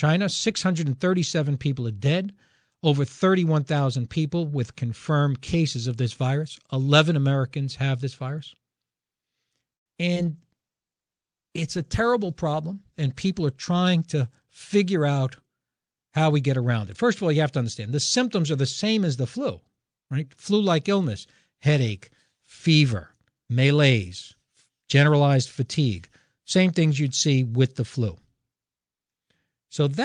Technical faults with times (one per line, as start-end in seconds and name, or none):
9.75-9.88 call audio freeze
10.14-10.18 short concealed packet loss
10.34-14.54 call bitrate drop
13.25-14.47 jitter buffer speed-up